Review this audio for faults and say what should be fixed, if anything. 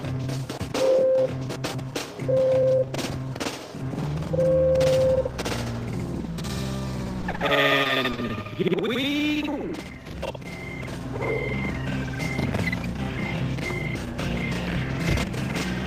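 Short concealed packet loss at 7.21–7.25 s, 7.31–7.35 s and 7.35–7.41 s: audio arrived too late, so the decoder extended the preceding sound across each hole, leaving brief smears.

Repeated packet loss (robotic sound) from 7.83 to 8.31 s: five gaps of up to 20 ms each were patched by extrapolation, so about a fifth of the stretch is synthetic and sounds choppy.

Both need a steadier network path, with a larger jitter buffer and forward error correction to absorb late or dropped packets.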